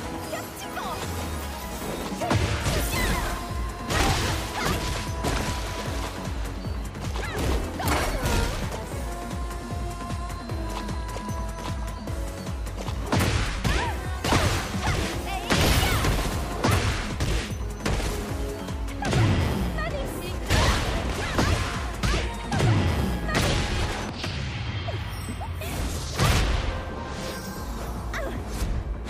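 A recorder or processor handling the audio in blocks of roughly 6 seconds likely drops a short stretch each time it closes one block and opens the next, so there is audio missing between chunks. At 8.70 s, 20.50 s and 26.40 s, about a tenth of a second of sound vanishes and the two sides butt together with no silence, heard as abrupt skips where the sound jumps forward.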